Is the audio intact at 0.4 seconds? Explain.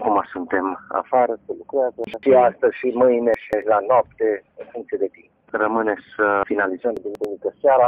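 Yes, at 0.4 seconds the audio is intact, with no dropout, glitch or other fault to be heard at that moment.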